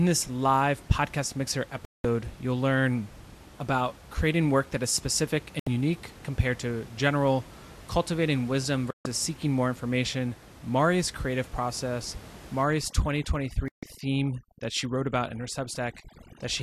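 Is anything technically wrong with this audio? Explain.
Yes. The speech has two kinds of fault.

A digital broadcast dropout mutes the sound four times. The first runs from 1.85 to 2.05 s, after "this live podcast mixer" and before "you'll learn about creating". The second runs from 5.59 to 5.67 s, between "work that is specific" and "unique compared to general". The others run from 8.91 to 9.06 s and from 13.68 to 13.83 s. Each time the receiver got corrupt or missing frames and went silent, for about 70 to 190 ms. The audio sent in those gaps is gone.

Overdone noise removal starts at 12.63 s, just after "creative process", and lasts to the end. The noise reducer pushed any band near its noise estimate far down. That strips out the room noise, which otherwise sits about 21 dB under the speech, and also the quiet parts of the voice. The background drops and breaks up into twinkling specks.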